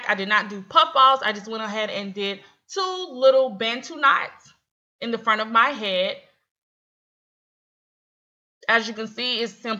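A soft, continuous rattle runs from 0.11 s to 9.79 s, made of tiny ticks arriving roughly every 20 ms, around fifty a second and several hundred in all, strongest where the sound is loud and sustained. These are clock slip clicks, likely caused by two devices running on unsynchronised clocks that differ by something like 0.1 percent. Each time that drift adds up to a full sample, one sample is dropped or repeated, leaving a small discontinuity.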